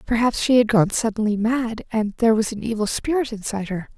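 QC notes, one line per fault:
No faults were heard in this speech recording. Nothing here needs a note.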